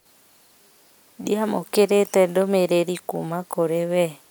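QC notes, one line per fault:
No faults detected on this pass; nothing to log.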